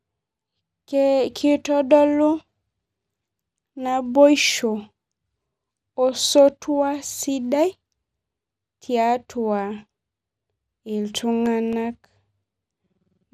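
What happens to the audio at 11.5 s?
From 11.33 to 11.86 s, CD scratch ticks: five evenly spaced ticks, the longest about 1 ms, where damaged samples beyond error correction are patched once per disc revolution. The regular rhythm distinguishes them from random clicks. Underneath, the sound is dull and gurgling with nothing above 15.1 kHz, likely MP2 compression at around 80 kbps rather than a simple low-pass filter.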